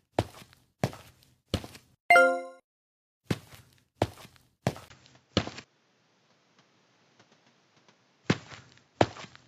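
At 4.88 s a gap of about 20 ms is followed by a duller, boxier sound that lasts to the end, with nothing above 7.6 kHz, a small level shift, and a new noise floor far below the signal. The input was likely switched to a poorer device.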